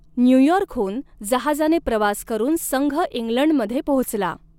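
No technical faults are audible.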